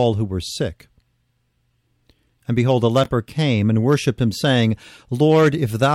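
A speech clip with chunks out of order from 3.04 to 3.06 s, between "behold a" and "came and worshipped him". One 5.8 ms chunk plays about three chunks late, leaving a brief jumbled moment. Unlike a dropout or stutter, no audio is missing or repeated.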